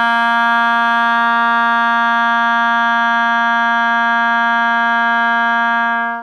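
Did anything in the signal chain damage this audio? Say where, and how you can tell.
No, no signal-chain damage detected.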